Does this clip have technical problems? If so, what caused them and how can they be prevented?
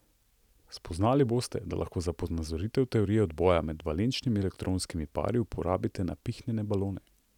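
No, no technical problems can be heard in this speech recording. With nothing gone wrong, there is no cause to trace and nothing to prevent.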